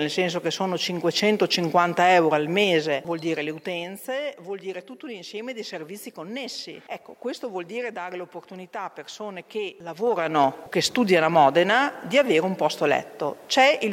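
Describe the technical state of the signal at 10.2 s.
At 10.2 s the sound carries zipper noise, running from 9.84 to 10.44 s. The level moves by about 15 dB in unsmoothed 2 dB jumps, around ten per second. Each jump leaves a small click, heard as a ticking zip over the sound.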